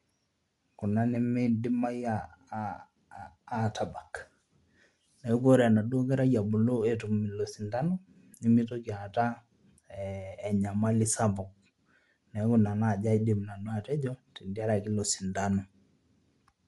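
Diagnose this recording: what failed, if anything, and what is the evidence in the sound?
The speech has a breathy, grainy edge from start to finish, and nothing is present above about 11.5 kHz. The fault sits at the codec stage and is likely Bluetooth LC3 compression on an LE Audio link. This transform coder works frame by frame, and the texture fits 10 ms frames at roughly 48 kbps. It discards upper-band detail and fills those bands with shaped noise, which produces the hiss-like grain heard throughout.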